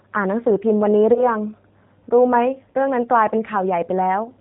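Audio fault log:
Throughout: G.729 codec. Speech is cut off above 4 kHz and rebuilt from a vocal tract filter, a pitch predictor and a few pulses per frame. The result is plainly rough and synthetic, which fits an 8 kbit/s G.729A stream.
1.14 to 1.25 s and 2.71 to 2.77 s: VoIP packet loss concealed by the speech codec. About 20 ms and 40 ms of audio go missing. The decoder stretches its last pitch and filter into a buzzy tone or coloured noise that fades. Each frame builds on the last, so the sound stays weak after recovery.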